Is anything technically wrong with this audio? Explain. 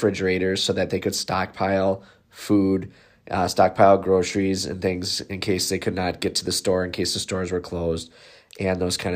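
No, nothing is technically wrong with this audio.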